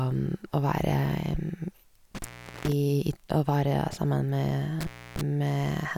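A speech recording in which the sound twice drops out abruptly, with a crackle at each edge and faint hiss in the gap: from 2.15 to 2.72 s, with the line open for about 0.43 s, and from 4.81 to 5.21 s, open for about 0.29 s. This is intermittent contact. A loose plug or cable briefly loses its connection, so the signal vanishes, and the scraping contact as it breaks and remakes produces the crackles.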